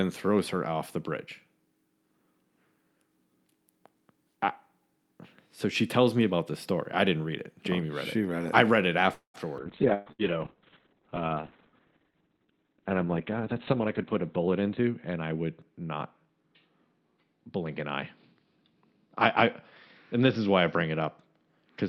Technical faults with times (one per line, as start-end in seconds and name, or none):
9.13-9.37 call audio freeze
9.64-21.89 call bitrate drop
9.94-10.22 burst of packet loss
13.37-14.98 jitter buffer speed-up